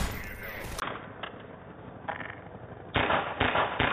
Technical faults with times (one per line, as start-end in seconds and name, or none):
0.80-3.92 input switched to a poorer device